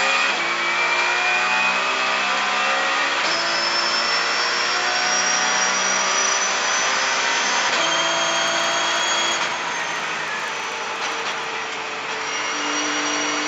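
From 8.24 to 11.48 s, a resampler restarted on every block. Each 40 ms block was converted alone, missing its neighbours' samples at the edges. The small error at each edge gives a regular 25 Hz tick, heard as a rough buzz. The conversion points to 16 kHz audio raised to 48 kHz.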